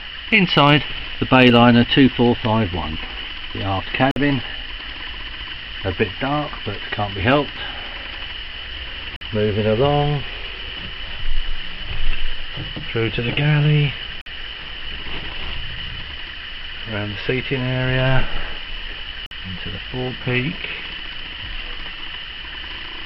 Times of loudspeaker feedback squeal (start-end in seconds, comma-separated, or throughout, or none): none